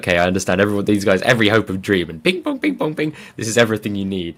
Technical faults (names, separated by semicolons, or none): microphone overload